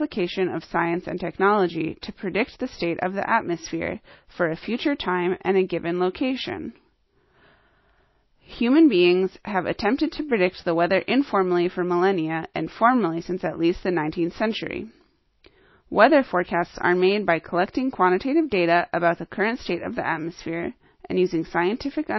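Speech runs for the whole clip with nothing above 5.8 kHz and the smeared, swirly artefacts of a very low-bitrate MP3, which points to low-bitrate audio saved at a high bitrate. The likely cause is a heavily compressed MP3, around 24 kbit/s, later re-encoded at something like 320 kbit/s. Unlike a clean low-pass filter or a low sample rate, the band that remains still carries the first encoder's artefacts, and the high bitrate of the second pass does nothing to remove them.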